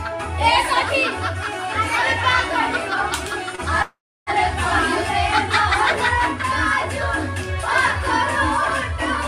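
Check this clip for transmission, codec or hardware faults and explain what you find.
Two transmission faults appear, both late-packet problems, close together.

At 3.55 to 3.61 s there is a short stall from a late packet. The jitter buffer emptied and the receiver stretched the last sound by 27 ms. It is held briefly, with a slight buzz or dip, and nothing is lost.

From 3.82 to 4.30 s there is a call audio freeze. The sound carries on as a fading fill, then about 320 ms of silence. The audio resumes where it stopped, now 446 ms later. Packets held up in transit, emptying the buffer, are the likely cause.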